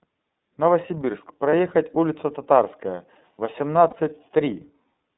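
Throughout, the speech sounds narrow, slightly rough and synthetic, with nothing below about 200 Hz or above 3.7 kHz. This is the iLBC codec, whose plainly audible coding damage fits its 13.33 kbps mode with 30 ms frames, each coded independently.

At 1.50 s and again at 3.90 s, a brief buzzy, held vowel-like sound replaces about 30 ms of speech, and the voice comes back clean right after. These are lost iLBC frames. Each gap fits one missing packet, which the decoder filled by repeating the last pitch cycle with noise.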